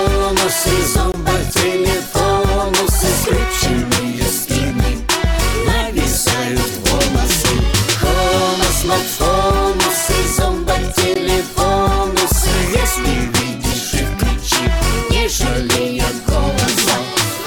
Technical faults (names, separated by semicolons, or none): gap at a join of encoded pieces